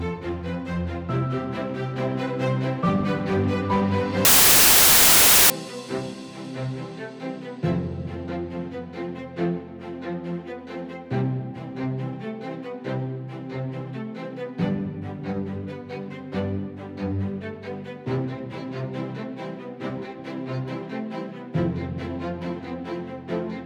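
From 4.25 to 5.5 s the audio breaks into loud, harsh noise with the original sound faintly audible underneath, running fast and high at about 1.33 times speed. This is a wrong sample width fault: packed 24-bit data read as 32-bit integers, scrambling most sample values.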